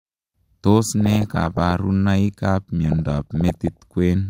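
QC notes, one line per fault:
1.01 to 1.71 s and 2.86 to 3.82 s, DAB burbling. Weak reception lets bit errors, below one percent, slip past error correction. Corrupted samples put short blips of noise in single sub-bands, and corrupted scale factors make sub-bands jump in level for up to a frame.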